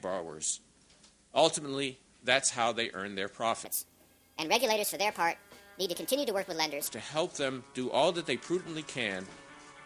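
From 3.65 s to 6.87 s the sound jumps up and rushes forward, a classic wrong sample rate fault. Everything runs about 1.45 times too fast and sits roughly 6.5 semitones higher, with speed and pitch rising together because nothing resampled the audio. It fits material recorded at 22 kHz being clocked out at 32 kHz. Right at 6.87 s it snaps back to its proper pace and pitch.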